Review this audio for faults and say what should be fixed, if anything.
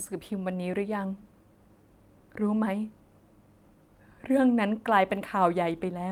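Nothing stood out on listening to this speech recording, so there is nothing here that needs fixing.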